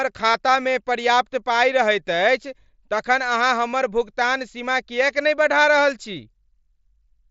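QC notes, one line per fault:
0.31–0.34 s concealed Bluetooth headset packet loss: a 30 ms gap, fitting four lost frames, is filled with a buzzy repeated waveform at full level rather than silence.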